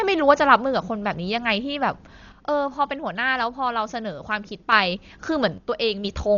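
Speech, and the whole thing sounds dull: nothing comes through above about 6.9 kHz, and the voice carries a rough, fluttery noise. That's most likely Dolby Digital compression pushed hard. The damage is heavy enough to fit a bitrate somewhere around 40 kbps. At that rate the encoder cuts the top of the band and leaves a lot of frequency lines without real detail. The decoder then fills those gaps with noise, which is the grainy shimmer you hear around the voice. On top of that, one channel likely drops out twice, from 2.32 to 4.72 s and again from 5.58 to 6.05 s. Each time the level dips abruptly by about 6 dB and then comes back. The drop is what you'd expect when one side of a stereo pair goes missing and the mono fold-down only gets half the shared signal. Anything that lived only on the lost side just vanishes for those stretches.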